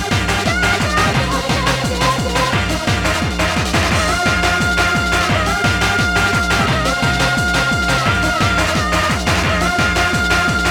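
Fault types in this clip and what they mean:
No fault types are present in this clip.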